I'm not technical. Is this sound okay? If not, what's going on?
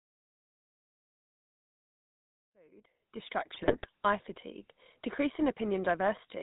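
No, not quite. Two things are wrong with this speech recording.

The first runs through the whole clip. It is the GSM full-rate codec, the sound of an early mobile phone call. This system rebuilds the voice from a simple model of the throat and mouth, driven by a rough pulse pattern. Much of the fine detail is thrown away, and nothing above 4 kHz gets through. So the voice sounds buzzy and gravelly, and the damage is plainly audible.

The second is brief. Right after "to visual pollution", from 2.40 to 2.49 s, there is a wireless microphone noise hit. The radio link from a wireless microphone to its receiver dropped out for a moment, as reflected signals cancelled each other. The receiver's own hiss rose up and covered the voice. You hear it as a quick swish or burst of static, lasting under a tenth of a second.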